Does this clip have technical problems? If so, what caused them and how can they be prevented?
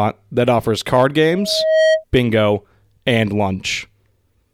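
Yes. From 1.31 to 2.04 s a loudspeaker feedback squeal swells at 635 Hz over roughly half a second to slightly above the speech, as the microphone re-amplifies its own loudspeaker; a steady interfering tone wouldn't grow. Keep microphones away from loudspeakers and reduce gain.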